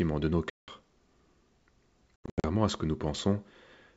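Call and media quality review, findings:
Hard-edged silent gap 0.50 to 0.70 s, right after "de nos", about 180 ms missing (roughly ten packets). Sound resumes slightly distorted, settling within tens of ms. Packet loss on an ADPCM call: the decoder's predictor and step size lost sync.

Choppy dropouts 2.16 to 2.45 s, ending just before "à ce que nous": 220 ms lost across 280 ms, longest hole 80 ms. Each restart is briefly distorted while the ADPCM decoder state recovers. The wideband G.722 path sounds clean, consistent with 64 kbit/s.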